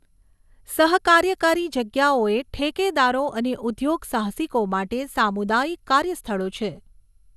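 From start to finish the speech carries generation loss: the band stops dead at 12.6 kHz, and beneath it the sound is swirly, hollow and smeared, with consonant attacks blurred. This is likely a lossy MP2 encode repeated about five times, each pass re-quantising on a shifted frame grid so that noise accumulates. A single low-bitrate encode would not sound this degraded; the artefacts suggest a 128 kbit/s chain that compounds its own damage.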